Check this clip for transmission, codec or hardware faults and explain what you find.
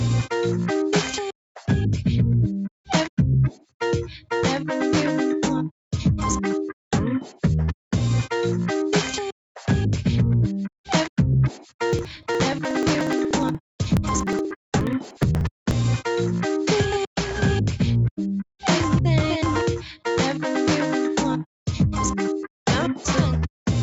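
Two faults stand out, both in the capture chain rather than the network, with the top end limited to 8 kHz by the call codec path throughout.

Sound cut by the noise suppressor, from 3.52 to 3.81 s. The suppressor misjudged part of the signal as background noise and pulled its gain down harder than the surrounding material, by about 16 dB at the deepest point. Only about a fifth of a second is caught, heard as a sudden dip where the sustained part thins out.

Periodic USB or driver dropouts, from 11.93 to 15.71 s. Something stalls the audio transport every 0.06 s, and each time a few milliseconds of samples are simply skipped rather than replaced with silence. Around seventy of these small gaps land at an even pace across the stretch. They come through as a steady ticking or crackle riding on the signal, about seventeen per second, that disappears in any quiet moments.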